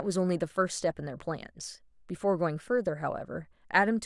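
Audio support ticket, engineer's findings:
Listened through the speech recording and found nothing to flag in the audio path, so there are no findings to log on this ticket.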